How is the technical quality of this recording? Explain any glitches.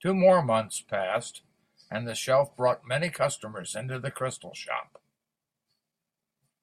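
The technical quality of the recording is sound, with no glitches to explain.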